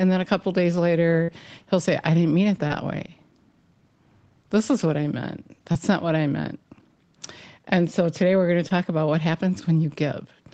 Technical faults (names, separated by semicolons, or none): burst of packet loss; short concealed packet loss